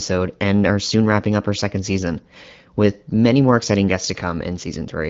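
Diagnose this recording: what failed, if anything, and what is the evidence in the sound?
Nothing in this speech recording points to a failure at any stage of the chain. What can be heard is the AMR wideband (HD Voice) codec working at 12.65 kbit/s, where it leaves only light coding damage and the speech stays clear.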